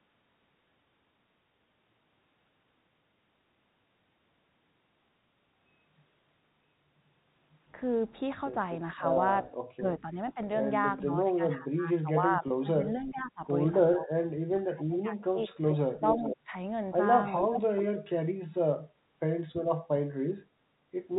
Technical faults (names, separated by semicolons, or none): speech suppressed in double talk; packet loss with pitch repetition; echo leak